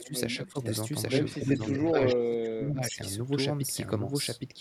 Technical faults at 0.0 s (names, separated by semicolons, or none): doubled audio track; echo leak; speech suppressed in double talk